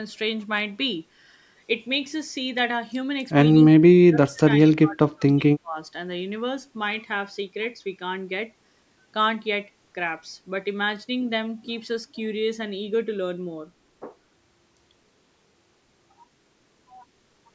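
It's a speech clip where the talker gets pushed down twice, from 3.53 to 4.4 s and again from 4.77 to 5.78 s, dipping by about 30 dB and then about 25 dB. That's likely speech suppressed in double talk, with the echo canceller turning down the near talker while the far side spoke.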